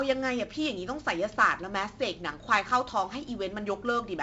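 Throughout, 4-bit ADPCM compression coarsely quantises each predicted step, leaving heavy, gritty hiss tracking the speech level; the spectrogram shows that noise floor and nothing above 7.8 kHz.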